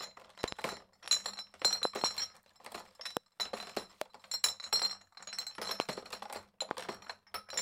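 The sound is hit by loud pops: doubled ones at 0.44–0.54 s and 1.85–2.06 s, then single ones at 3.17, 4.01, 5.80 and 6.71 s, peaking about 25 dB over the audio (the last about 20 dB), with the sound carrying on underneath. Likely voltage spikes from a switch, static or a driver glitch.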